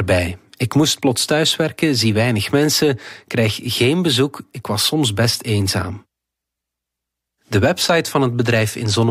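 Listening through the speech, nothing stood out as a technical fault at any point.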